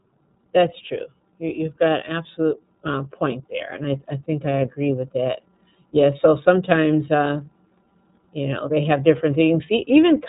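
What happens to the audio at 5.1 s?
At 5.1 s, as throughout the speech, the iLBC codec is at work: nothing above 3.8 kHz survives, and the voice sounds rough and slightly synthetic, with each 30 ms frame coded on its own. A plain low-pass filter would leave it dull but smooth, not grainy like this.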